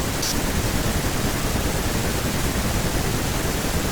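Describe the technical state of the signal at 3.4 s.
Nothing is wrong with the signal at 3.4 s; the speech there carries through intact, with no dropout, distortion or other technical fault to be heard at that point.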